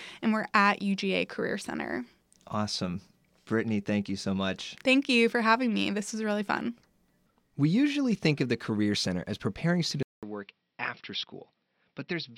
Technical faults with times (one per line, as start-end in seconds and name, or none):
10.03-12.37 input switched to a poorer device